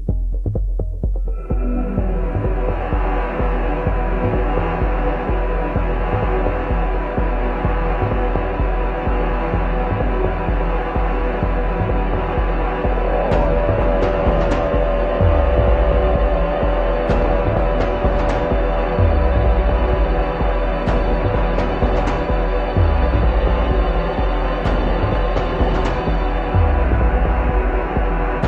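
No technical faults are audible.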